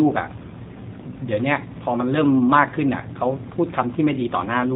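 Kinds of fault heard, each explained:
G.729 codec, throughout: speech rebuilt from a vocal tract model and sparse pulses loses everything above 4 kHz and sounds plainly rough and synthetic, fitting 8 kbit/s.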